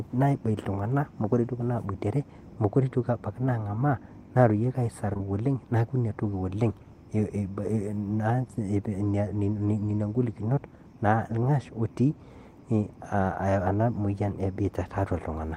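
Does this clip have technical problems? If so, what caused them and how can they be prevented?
Yes. At 5.13 to 5.17 s and again at 5.17 to 5.21 s there are two back-to-back instances of short concealed packet loss, each missing about 20 ms of audio. The decoder bridged each gap by extending the preceding speech and then crossfading into the real signal, so the moment sounds briefly smeared. A larger jitter buffer and forward error correction would prevent it.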